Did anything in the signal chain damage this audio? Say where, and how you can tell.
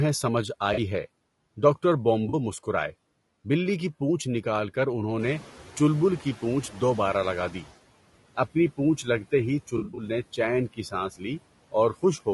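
Yes. The call-processing noise suppressor cuts steady background noise by about 18 dB throughout, frame by frame. The noise floor dips in the gaps and swells back under the speech.

At the codec stage, the audio is rough and grainy, with hiss filling the spaces between harmonics and a synthetic-sounding top band. This plainly audible damage is likely from low-delay AAC compression (AAC-ELD). Its short frames resolve pitch poorly, and this sounds like a low bitrate of around 32 kbps.

AAC frame loss with concealment, on the network side, shows as smeared, phasey patches where the decoder rebuilt missing audio from the last good spectrum. This happens at 0.73–0.79 s and 2.29–2.34 s, about 40 ms each. From 9.77 to 10.03 s, about 140 ms of gaps are scattered over roughly 0.2 s, each run no longer than about 40 ms.

The noise suppressor is catching up from about 5.2 to 7.7 s. The room noise jumps by about 13 dB at roughly 5 s, and the suppressor's noise estimate lags behind it. 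The louder noise comes through at first and then sinks over about 2.5 s. Once settled, it is reduced by about 12 dB.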